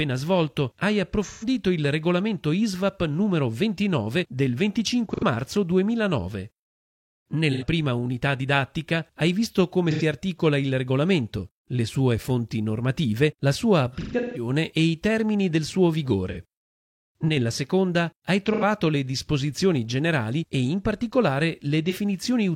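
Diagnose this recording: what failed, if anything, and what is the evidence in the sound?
The fault is at the codec stage: AAC frame loss with concealment. Smeared, noisy patches replace the audio at 1.24, 5.14, 7.52, 9.91, 16.31, 18.46 and 21.90 s, lasting roughly 40 to 130 ms. From 13.92 to 14.49 s the dropouts cluster, with a longest run of around 150 ms. The gaps come in steps of about 43 ms, pointing to whole frames missing. The decoder rebuilds each gap from the last good spectrum rather than leaving silence.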